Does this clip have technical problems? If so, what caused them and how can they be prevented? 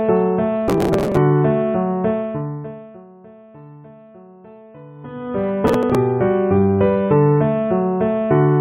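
Yes. Processor overload crackle appears from 0.68 to 1.17 s and again from 5.67 to 5.95 s. The processor repeatedly missed its buffer deadlines and the missed blocks were skipped. The rapid tiny gaps, consistent with buffers of around 3 ms, create a gritty tearing. A larger buffer or a lighter processing load would prevent it.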